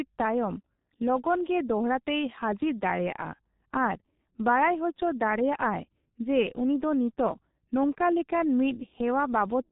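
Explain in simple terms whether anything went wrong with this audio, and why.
The speech was squeezed through the G.723.1 codec, an old internet-phone compression scheme that keeps only a rough sketch of a voice, chopped into short chunks and updated slowly. Here the squeezing is heavy, and it lasts the whole clip. Everything above the range of a telephone line is thrown away, so the voice sounds muffled and hoarse, and quick consonants smear together instead of landing crisply.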